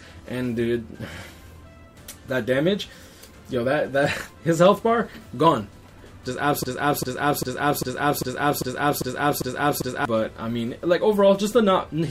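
A broken-record loop runs from 6.63 to 10.05 s: a 398 ms fragment repeats nine times back to back, likely from a stalled stream resending its last buffer.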